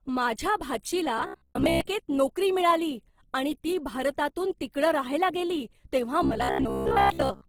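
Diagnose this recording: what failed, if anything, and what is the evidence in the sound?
The codec stage shows damage throughout: the speech sounds rough and grainy, with plainly audible texture where clean tones and formants should be, yet the spectrum still reaches about 20.3 kHz with no hollow, swirling gaps. That points to Opus compression in its fullband music mode at a low rate, which fits around 16 kbps. Each band's energy is preserved but filled with folded or noise-like content. On a spectrogram, harmonics look smeared and speckled rather than punched with holes.

A buffer or driver stage fails twice, from 1.18 to 1.81 s and from 6.23 to 7.48 s. Both stretches turn into a rigid, metallic buzz at 66.7 Hz that still loosely tracks the speech, the robotic sound from repeated short buffers. The likely cause is audio arriving late, so the software replays the last 15 ms chunk, covering most of the audio there while real samples are skipped. 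The waveform would show repeated 15 ms segments across most of those spans, and the spectrogram would show evenly spaced 66.7 Hz harmonic lines.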